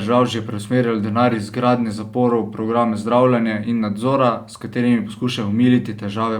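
At 1.30 to 1.34 s, right before "iz gradnje zaporov", there's a corrupt frame decoded: flipped bits got played anyway, dumping energy at wrong frequencies. It comes out as a short chirpy burst, peaking around -15 dBFS, and its length fits roughly two damaged frames.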